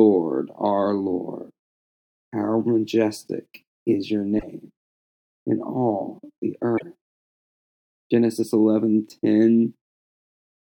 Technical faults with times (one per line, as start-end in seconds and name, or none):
4.35-4.43 damaged data in a compressed stream
6.75-6.82 damaged data in a compressed stream